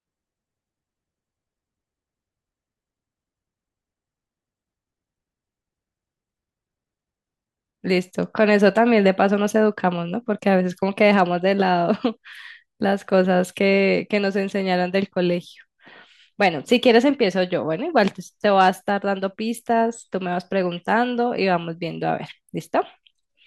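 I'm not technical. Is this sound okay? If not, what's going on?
Yes, this sound is okay, with nothing going wrong in it.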